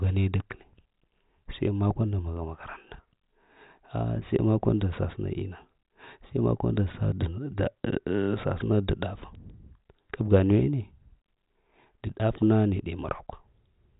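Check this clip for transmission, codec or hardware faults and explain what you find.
No faults found in this clip.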